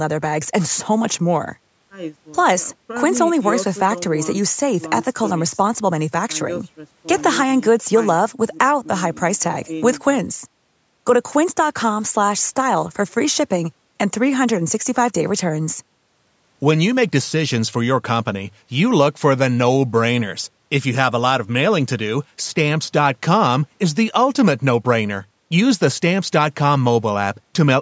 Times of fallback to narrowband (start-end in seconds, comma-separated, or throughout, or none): none